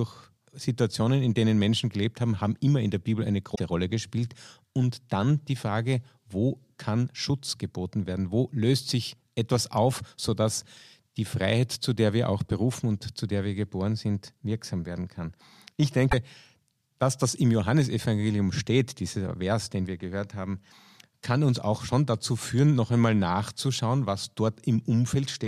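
At 3.54 to 3.60 s, and again at 16.11 to 16.14 s, the speech briefly glitches and jumps ahead, a glitch of about 50 ms and then about 30 ms. Both are likely a broken MP3 bit reservoir. Frames of roughly 26 ms were lost, and the frames that followed reached back into the reservoir for data they had stored there. They decoded bytes from the wrong frame instead, so the first frames after each cut came out corrupted.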